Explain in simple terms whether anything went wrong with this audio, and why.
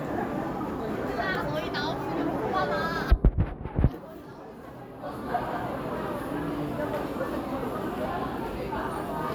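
Two brief clicks interrupt the sound, one at 4.32 s and another at 6.82 s. Each is a single sharp tick. These clicks are most likely caused by dropped samples: a tiny piece of the audio stream, far less than a millisecond, went missing, so the recording jumps straight from one point to a slightly later one. That sudden jump is too short to remove anything you could hear as missing, but the abrupt step produces the click.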